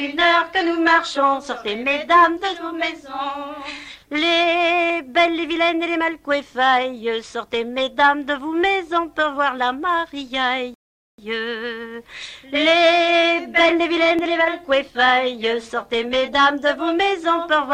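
The audio has two skips, at 4.90 s and 14.19 s. At each, the sound jumps forward with no gap, skipping roughly 10 ms. The likely cause is a dropped buffer (overrun): the capture side missed a block of samples before the hardware overwrote it, and the surrounding audio was spliced together. A rebuffering stall runs from 10.74 s to 11.18 s. Playback drops to silence for 441 ms, then resumes exactly where it stopped because the player ran out of downloaded data and waited for more. Nothing is lost, but the clip runs longer.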